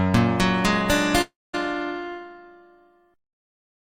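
At 1.21 s the sound breaks off and doesn't return until 1.55 s. This is a long network dropout, likely caused by packets failing to arrive for about a third of a second. The receiver stretches the last sound into a fading buzz. That decays away, and roughly 0.21 s of silence follows. About 0.32 s of the original audio is simply gone. Playback resumes later in the material, not where it stopped.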